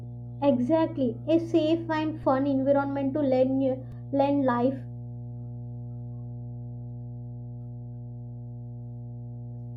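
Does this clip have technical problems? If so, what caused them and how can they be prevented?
Yes. Mains hum runs through the whole clip as a steady 60 Hz tone with low harmonics, roughly 15 dB below the speech. A ground loop or nearby transformer is coupling the power line into the signal. Preventing it means breaking ground loops with balanced cabling or isolation and keeping transformers away.

A repeated buffer is heard as a brief buzzy click at 2.23 s, between "exactly a safe and" and "fun environment to", and at 3.92 s, just before "learn life". When new audio arrived late, a roughly 2.7 ms piece replayed three and two extra times. This fits a 128-sample buffer. A larger buffer or lighter system load prevents these underruns.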